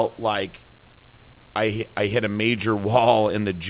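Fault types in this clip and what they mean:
Nothing to flag here; the speech comes through the phone-style call line, which tops out around 4 kHz, and the faint room noise sits well beneath it, about 36 dB down.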